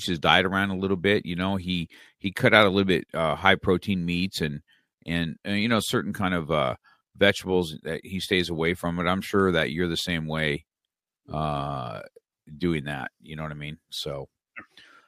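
From 0.33 s to 13.9 s there's a run of faint, evenly spaced ticks, roughly every second and a half, about ten in all. These are clock slip clicks, likely from two unsynced clocks drifting around 15 ppm apart, so a single sample gets dropped or doubled each time.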